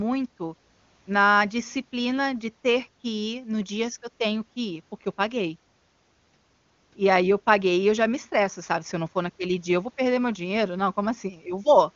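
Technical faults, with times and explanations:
No technical faults can be heard in this speech clip. It has passed through an AMR wideband (HD Voice) codec whose clear rendering points to the top rate of about 24 kbit/s, and the sound stops at about 7 kHz, the usual wideband ceiling.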